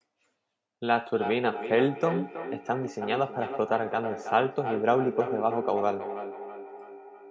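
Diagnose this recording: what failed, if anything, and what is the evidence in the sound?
Feedback echo between two devices, at the call-processing stage, runs from 1.14 s to the end. The speech returns at a steady interval of about a third of a second, at up to about 8 dB below the direct speech. A second device in the room replays this signal into the microphone, and the local echo canceller cannot remove sound it did not play itself.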